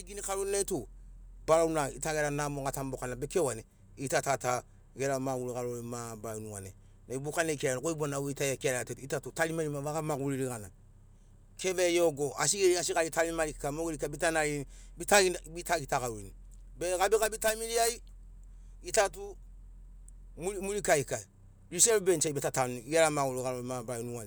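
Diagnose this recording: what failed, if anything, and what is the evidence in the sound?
Nothing failed; no fault is audible anywhere in this speech.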